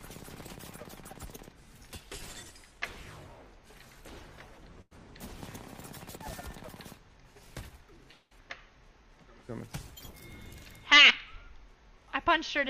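At 4.81 s a burst of packet loss leaves a gap of about 0.1 s. The receiver extends the last sound for roughly 96 ms as a held, fading sound, then resumes with about 100 ms of material skipped. A spectrogram shows smeared energy tapering off before a clean cut.

From 8.11 to 8.33 s the last sound is stretched into a fading fill for about 0.2 s, drops to silence for some 20 ms, and comes back with roughly 200 ms gone, likely a long network dropout. The waveform decays smoothly, flattens briefly, then jumps back in.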